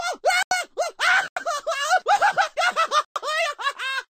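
Blocks of digital silence: the output was left unfilled for 85 ms at 0.43 s and 1.28 s (which fits a 4096-sample buffer) and 110 ms at 3.05 s. Each time, the sound drops abruptly into a short hole.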